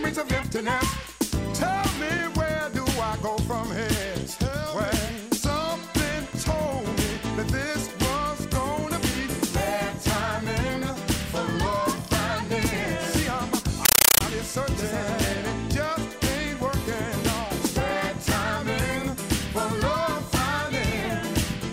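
From 13.85 to 14.21 s the audio becomes loud, chattering static: a compressed stream played as audio, where undecoded Dolby Digital data, which fits a 448 kbps AC-3 stream, is treated as samples. Each 9.33 ms noise burst repeats 31.25 times a second, showing as loud blocks separated by flat zero padding in the waveform and as evenly spaced broadband vertical stripes on a spectrogram.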